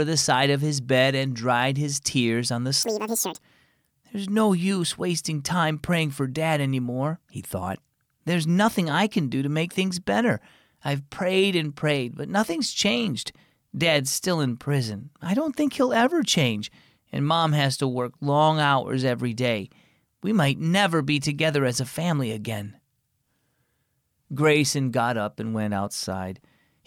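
A short burst of audio read two samples at a time (double speed) runs from 2.83 to 3.40 s. The reader treats each pair of samples as one frame, so that stretch plays at twice the speed and 12 semitones higher.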